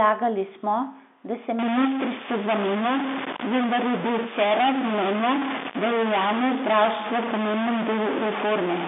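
Speech over a telephone line, band-limited to roughly 200 Hz to 3.6 kHz as G.711 coding leaves it, turns distorted from 1.59 s to the end, the mark of a stuck bit, likely from a failed data line or converter. Unlike clipping, the grit persists through pauses as steady noise, because the frozen bit throws off small values near silence too rather than only flattening peaks.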